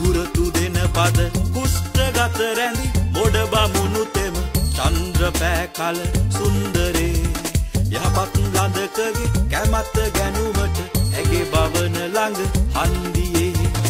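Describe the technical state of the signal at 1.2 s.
Around 1.2 s, the audio is intact, with no audible fault in the signal at that point.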